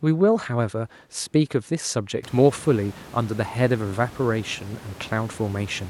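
No technical faults can be heard in this speech recording. Around two seconds in, the room noise around the microphone rises by about 21 dB and then sits about 23 dB below the speech, which belongs to the recording space rather than the system.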